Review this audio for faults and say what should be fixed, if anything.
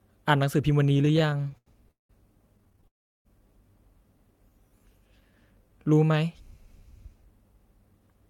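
From 0.83 to 2.11 s the speech has repeated stalls (stutter): 23 little hangs where the receiver kept extending the last sound while packets trickled in late, the longest about 182 ms. That padding fills roughly 37% of the stretch, so it drags. A shorter burst follows at 2.57–2.87 s with eight tiny stalls of about 11 ms or less.

Right after, at 2.87–3.27 s, there's a call audio freeze: the sound hangs, then falls to near silence for about 370 ms before picking up where it left off. Nothing seems lost, and the likely cause is packets held up in transit until the jitter buffer ran dry.

From 4.18 to 6.13 s there's a jitter buffer slow-down. The speech runs at about 92% speed with the pitch unchanged, as the receiver repeats single pitch periods to rebuild its reserve. That adds about 152 ms, and the sounds come out drawn out.

Near the end, at 7.86–8.22 s, a jitter buffer speed-up takes over. 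The speech runs at about 114% with the pitch held, as short pitch-period chunks are cut to shed excess delay. Around 50 ms goes, and it sounds hurried.

To fix it, steady the network path feeding this receiver and give the jitter buffer a slightly deeper, less reactive target so it stops swinging between starving and overfilling.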